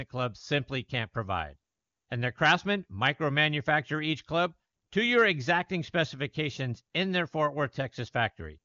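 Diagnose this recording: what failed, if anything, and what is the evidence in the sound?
Nothing stood out on listening to this speech recording; it sounds like a wideband phone call, with content stopping a little above 7 kHz.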